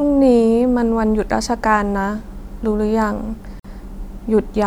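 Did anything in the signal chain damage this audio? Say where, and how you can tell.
Yes, a gap at a join of encoded pieces (codec stage): a 50 ms silence at 3.60–3.64 s, from encoder delay and padding. Unlike a dropout, the speech resumes exactly where it stopped.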